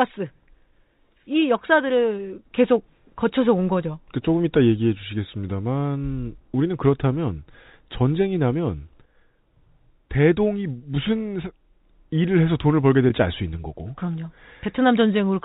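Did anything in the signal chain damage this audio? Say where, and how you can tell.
No, nothing in the signal chain stood out as damaging this speech on listening.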